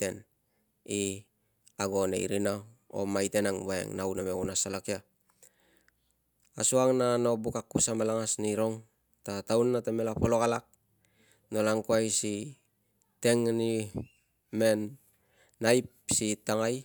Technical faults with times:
none

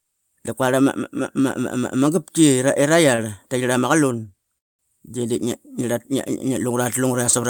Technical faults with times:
3.15-3.20 short stall from a late packet
4.58-4.81 call audio freeze

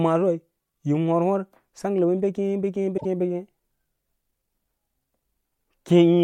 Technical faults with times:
2.96-3.05 broken MP3 bit reservoir

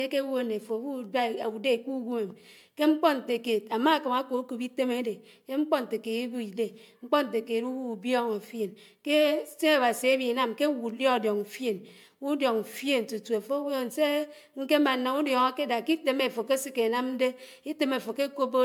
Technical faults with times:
0.00-18.65 generation loss

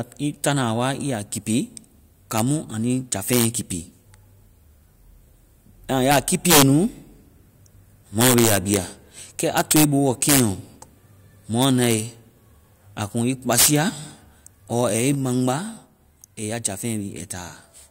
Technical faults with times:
2.38 integer overflow
3.33-3.45 integer overflow
6.11-6.62 integer overflow
8.21-8.77 integer overflow
9.58-9.84 integer overflow
10.23-10.40 integer overflow
11.62-11.93 integer overflow
13.53-13.76 integer overflow

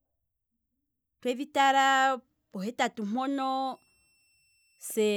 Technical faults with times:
3.66-5.16 switching supply whistle

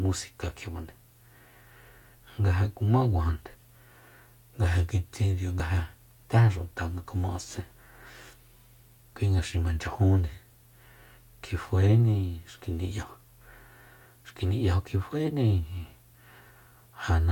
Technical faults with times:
5.60 overlap between stream segments
9.57 overlap between stream segments

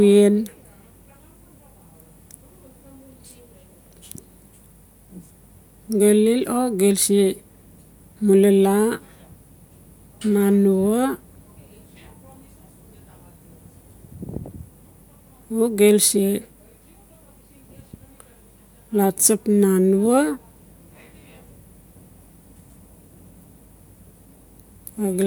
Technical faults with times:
none

